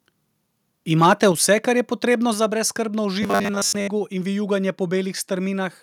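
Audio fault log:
1.02–1.24 s, microphone overload: peaks around 3 dB past the converter's limit are flattened, about one percent of samples, before "vse kar je potrebno"; harsh crackle, likely from excessive input gain.
1.32 s, microphone volume stepped down: speech and background drop together by about 4 dB in one step, unlike a fade; likely automatic gain reduction reacting to the clipping.
3.23–3.88 s, robotic sound from repeated short buffers: after "je potrebno za brezskrbno", a rigid 100 Hz metallic buzz, with most audio repeated; likely a 10 ms buffer looping.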